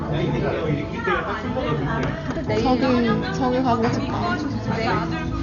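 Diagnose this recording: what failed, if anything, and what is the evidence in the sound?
The codec stage failed. Throughout, nothing sounds above 6.9 kHz, so the audio is dull. Rough, fluttering noise surrounds tones. The likely cause is heavy Dolby Digital compression, fitting a bitrate near 48 kbps. The encoder cut the band and left many lines for the decoder to fill with dither noise.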